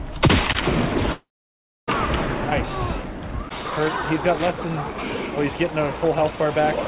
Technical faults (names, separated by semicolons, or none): loose connector crackle; long network dropout